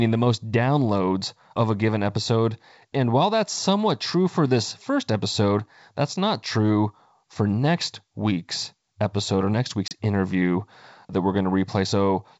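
At 9.88 to 9.93 s, between "week's episode or next" and "interview that we're", a hard-edged 30 ms silent gap cuts in, and the sound resumes off-balance. This is packet loss on an ADPCM call: a few packets vanished, and the decoder's predictor and step size briefly lost step with the sender's.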